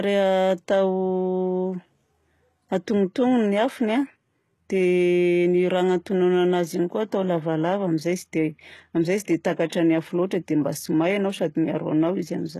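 A speech recording carries plainly audible codec damage throughout, most likely HE-AAC compression at a rate that fits a 16 kbps stream. Nothing reaches above 12.3 kHz, and the upper band is synthesised by copying lower bands upward, so sibilants come out gritty and lispy, with treble harmonics that no longer match the fundamentals below. There is also a pre-echo from 9.69 to 9.72 s: block-wide quantisation noise spills about 29 ms ahead of a sharp attack, putting a brief hiss before it and softening the onset.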